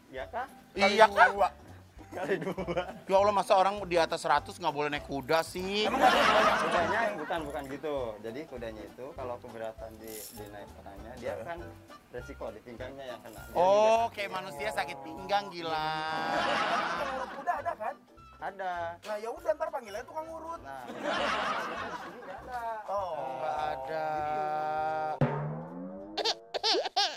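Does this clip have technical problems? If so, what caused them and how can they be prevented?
Yes. The level falls abruptly by about 6 dB from 1.99 to 2.12 s and again from 13.96 s to the end, likely one channel dropping out. Secure stereo cabling and monitor both meters.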